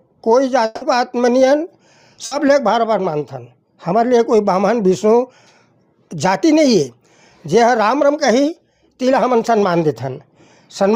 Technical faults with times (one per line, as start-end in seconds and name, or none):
0.65-0.83 long network dropout
2.25-2.33 burst of packet loss